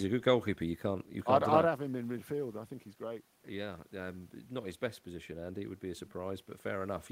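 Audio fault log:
1.79–7.11 s, automatic gain rising: after "I'd have", the input drops about 11 dB as the talker moves away near 1.5 s. The gain control lifts it slowly, so voice and room noise swell together. The waveform envelope and spectrogram noise floor climb steadily to the end.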